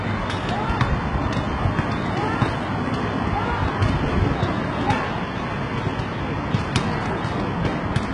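Throughout the recording, the treble sounds synthetic and gritty with a metallic sheen, and nothing is present above 11.1 kHz. The damage is heavy and likely comes from HE-AAC compression, where copied lower bands replace the true upper spectrum, consistent with a bitrate around 12 kbps.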